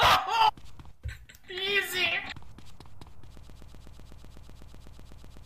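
At 3.37 s the player, encoder or stream likely stalled and kept resending its last fragment, a broken-record loop. A 125 ms piece repeats exactly, back to back, 17 times until the end, replacing the audio that should have played.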